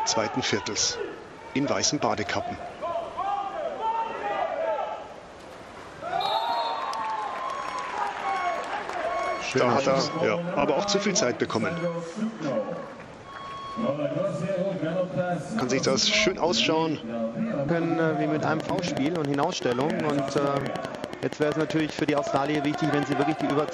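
From 18.60 s to 23.70 s a train of clicks runs over the audio: sharp, near-identical pulses at a steady 10.6 per second, around fifty in all, each standing well above the surrounding sound, on the order of 15 dB. They read as a regular ticking that continues through quieter stretches as well. The even spacing and uniform shape point to an external pulse source, likely electrical interference from nearby equipment or a faulty connection or power supply.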